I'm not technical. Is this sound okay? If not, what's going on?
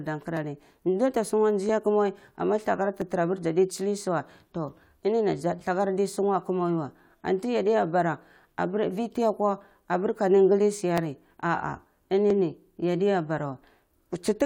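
No. From about 0.37 s to 13.63 s the speech has a click roughly every 1.33 s, around ten in all. These are clock drift buffer slips, most likely because two pieces of equipment each kept slightly different time, so every so often a tiny sliver of sound was skipped or repeated to catch up. Random glitches from a bad connection come at uneven moments. These ones stay steady, like a metronome.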